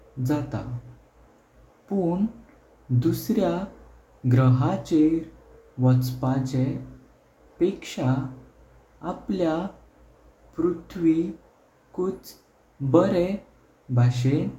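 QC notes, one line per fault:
No faults heard.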